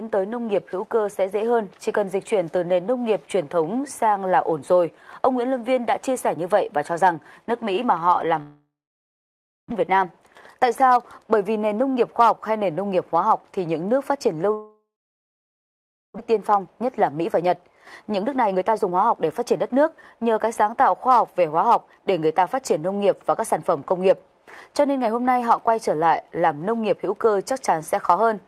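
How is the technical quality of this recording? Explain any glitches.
There are two real glitches, each happening twice: a gap in the sound, followed by a stretch where things run a bit fast.

The long network dropouts are at 8.41 to 9.72 s and 14.54 to 16.20 s. The likely cause is audio simply not arriving. The last sound trails off as a fading buzz or hiss, then there's roughly a second of silence the first time and about 1.3 s the second. When the sound returns, about a second of material is gone for good.

The jitter buffer speed-ups come right after each gap, at 9.80 to 12.11 s (about 111% speed) and 16.28 to 20.55 s (about 114%). The late audio piles up in the buffer, so the receiver trims tiny pitch-period slices to catch up. That removes roughly 0.3 s the first time and 0.7 s the second. The pitch stays the same, but everything sounds hurried.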